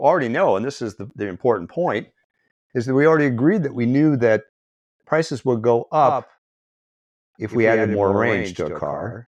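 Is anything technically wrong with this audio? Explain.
Yes. A doubled audio track runs from 6.02 s, just after "prices would go", to the end: a likely second capture path adds a copy roughly 100 ms late and about 5 dB quieter, which sounds like a dry, clipped echo.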